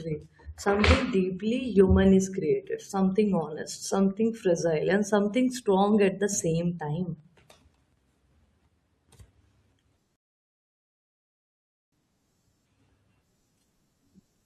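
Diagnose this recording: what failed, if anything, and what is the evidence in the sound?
Playback failed with a rebuffering stall. The speech cuts to silence at 10.16 s and picks up again at 11.92 s. It resumes exactly where it stopped, with nothing skipped. The player ran dry of downloaded audio and waited, adding about 1.76 s.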